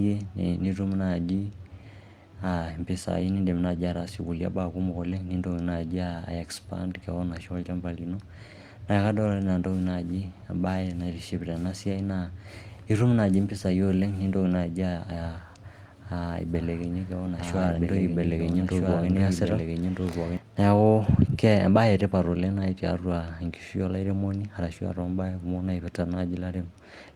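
Brief rough and noisier patches interrupt the speech at 3.57 s, 4.91–5.13 s, 10.73 s, 17.47–17.77 s and 18.87 s, without any gaps. This is lost packets rebuilt from error correction: the decoder played low-bitrate backup copies carried in the following packets, which lack the top frequencies. From 16.55 to 20.37 s a second copy of the sound runs about one and a half seconds behind, roughly 5 dB quieter, dry and cutting in and out abruptly. This is a doubled audio track, likely the same signal captured again through a slower path and mixed in.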